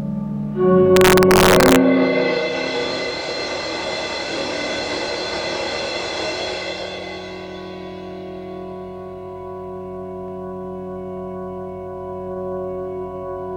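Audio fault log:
0.96–1.76 s, integer overflow: loud peaks in this stretch were driven about 2 dB past the top of the integer range. Instead of being held at the limit, they wrapped around to the opposite extreme, producing sharp, violent cracks far harsher than ordinary clipping. On the waveform, the crests that should flatten at the limit jump abruptly to the opposite sign. A spectrogram shows bright vertical broadband streaks at each wrap.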